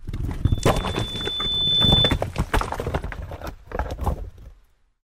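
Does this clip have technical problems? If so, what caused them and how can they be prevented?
Yes. From 0.44 to 2.20 s there is a loudspeaker feedback squeal. A single 3.5 kHz tone swells over roughly a second and a half to around 10 dB above the sound. The microphone is picking up its own loudspeaker, and the loop gain exceeds one at that frequency. An electrical whine holds a steady level, but this tone builds up by itself. To prevent it, keep the microphone away from and out of line with the loudspeaker, lower the monitor gain, or notch out 3.5 kHz.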